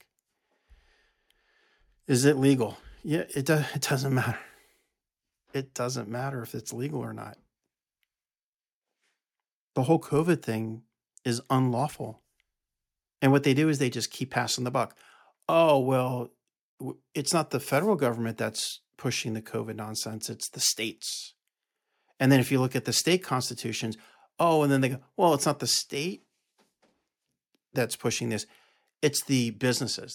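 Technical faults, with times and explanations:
No technical faults can be heard at any point in the speech recording.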